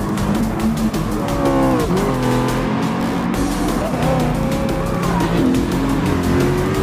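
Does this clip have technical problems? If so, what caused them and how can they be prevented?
Yes. Two very brief glitches break through the sound, at 0.40 s and again at 4.32 s. These come from damaged data in a compressed stream: bytes in those frames were corrupted, so the decoder misread them, lost sync and had to find the next valid frame header. Prevention: protect transfers and storage with checksums or error-correcting transport, and re-fetch any file that fails verification.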